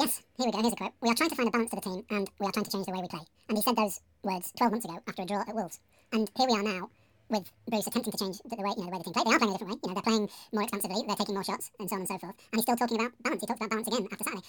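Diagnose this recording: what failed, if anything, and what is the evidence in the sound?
The sample-format conversion stage failed: the reader took pairs of samples as single frames, audio read two samples at a time (double speed). Throughout, the speech runs at twice normal speed and 12 semitones (an octave) higher.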